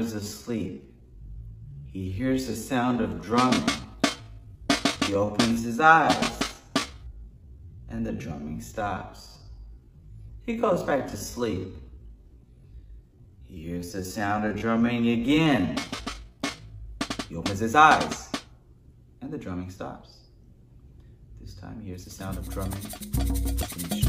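From the start to 16.86 s the audio plays as a time-stretched section, running at about 0.64 times its natural pace while the pitch holds steady. This is likely the result of software lengthening the passage to fill a set duration, repeating short slices of the signal to pad it out rather than resampling. The slowed material drags until normal pace resumes abruptly at 16.86 s.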